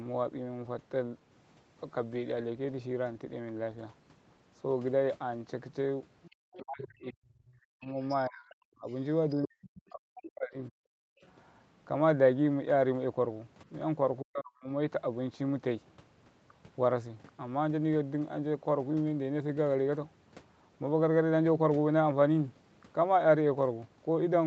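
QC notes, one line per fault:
6.22–6.85 s, 7.84–8.25 s and 8.9–9.82 s, other side's voice leaking through: a faint second talker sits about 20 to 25 dB under the main speech, likely because echo cancellation left far-end loudspeaker sound in the microphone. On a spectrogram it shows as weak harmonic streaks.
6.58–8.87 s, 9.45–10.72 s and 14.21–14.71 s, speech suppressed in double talk: while the far end talks, the near talker dips by as much as about 40 dB, likely from the echo canceller attenuating everything it couldn't separate. On a waveform the envelope drops sharply.
11.0–11.24 s, background gated by the echo canceller: the room tone drops about 40 dB for roughly a fifth of a second, then returns as the suppression releases. It shows as a short, near-silent notch in the waveform and a blank vertical gap across the spectrogram's noise floor.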